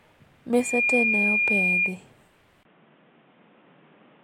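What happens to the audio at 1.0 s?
At 1.0 s the speech is overlaid by loudspeaker feedback squeal, running from 0.53 to 1.98 s. The microphone picks up its own loudspeaker, and the loop gain exceeds unity at 2.4 kHz. That tone swells over roughly a third of a second into a shrill whistle sitting a few decibels above the speech.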